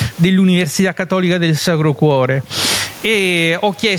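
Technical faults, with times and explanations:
Throughout, gain pumping: a gain swing of around 20 dB, likely from input gain set far too high with a fast limiter clamping it, so the speech sounds squashed and flattened in level.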